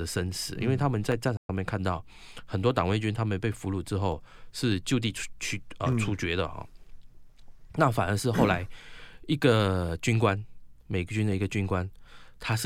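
Clock drift buffer slips run from 0.52 s to 12.53 s as a click recurring every 0.6 s through the speech, about twenty in all. The steady spacing points to two devices running on separate clocks that disagree by something like 700 parts per million. The buffer between them slowly drifts until a block of roughly fifteen samples has to be dropped or repeated, and each such jump in the waveform is heard as a click.

A playback stall falls from 1.37 s to 1.49 s, where the speech cuts out mid-flow into silence for 120 ms before sound returns. The likely cause is the player running short of data, or its audio thread being held up, so the output had nothing to deliver until it recovered. The gap is long enough to be heard as a distinct break rather than a click.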